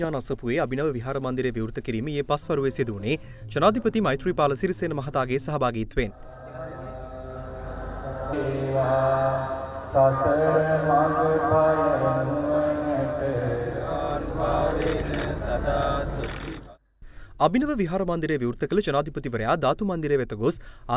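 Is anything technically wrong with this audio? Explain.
No, nothing technically wrong can be heard anywhere in this audio.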